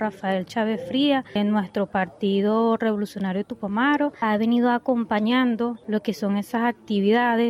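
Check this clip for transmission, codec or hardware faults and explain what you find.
One fault is present: from 4.07 to 5.23 s the sound speeds up by 5.83% and rises about a semitone (98 cents), then snaps back, likely a drift correction step from clock-matching software.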